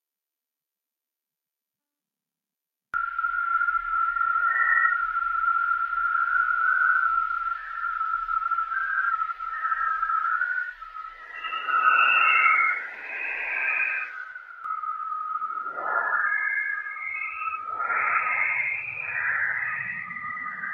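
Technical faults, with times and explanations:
Throughout: noise suppressor applied to music or sounds. A speech-tuned suppressor keeps treating steady parts of the sound and its ambience as noise, so the level pumps by around 5 dB. Onsets pass while sustained portions and tails sag, which sets it apart from a plain compressor.
10.74–11.33 s, 14.17–14.71 s and 15.57–15.82 s: sound cut by the noise suppressor. In these stretches the suppressor pushes the sound down harder than elsewhere, by about 10, 12 and 7 dB. Sustained or decaying material sinks or is cut short while the attacks mostly come through, unlike a dropout, which would silence everything.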